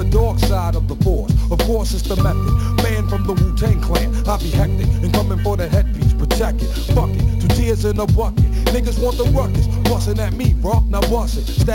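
From start to finish there's imaging from sample-and-hold upsampling. Someone took material at 16 kHz up to 44.1 kHz by just repeating each sample, with no smoothing filter afterwards. That leaves mirrored copies of the spectrum, the lowest sitting between 8 and 16 kHz at about 26 dB below the signal. You hear it as a bright, metallic fizz riding on top, rising and falling with the level, with its tone sliding the wrong way when the pitch moves.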